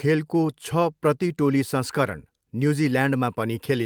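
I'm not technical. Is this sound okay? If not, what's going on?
Yes, nothing in this recording stood out as a problem when I listened to it.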